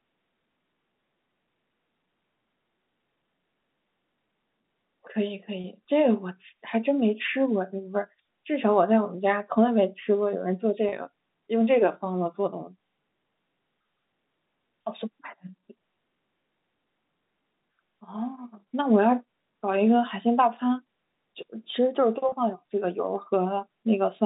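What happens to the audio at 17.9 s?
Nothing goes wrong at 17.9 s: the speech continues intact through that moment, carried on the ordinary G.711 telephone band with its top near 3.7 kHz.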